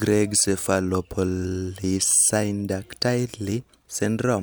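A speech recording with nothing technically wrong with it.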